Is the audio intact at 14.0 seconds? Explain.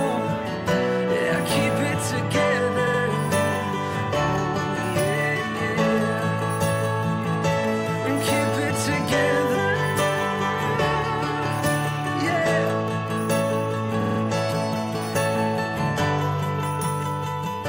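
No. From 14.00 to 14.19 s there are repeated frames: a 46.4 ms block, which fits two compressed frames, plays four extra times and adds 186 ms. It stutters, and a spectrogram shows identical repeated tiles.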